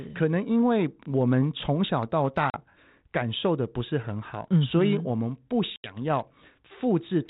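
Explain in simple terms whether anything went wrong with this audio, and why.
Twice the speech drops out into sudden silence: around 2.5 to 2.62 seconds, where about 40 milliseconds of sound goes missing, and around 5.76 to 5.96 seconds, where about 80 milliseconds is lost. This is packet loss on an ADPCM call. A couple of small chunks of the phone signal went missing the first time, and a handful the second. The gaps have hard edges rather than fading, and each gap was simply filled with silence.

What sets this apart from an ordinary dropout is what happens right after each gap. This phone coding works by guessing each next bit of sound from what came before, so losing chunks leaves the receiving end's guesses out of step with the sender's. When the speech returns it comes back briefly with some roughness. It settles within a fraction of a second.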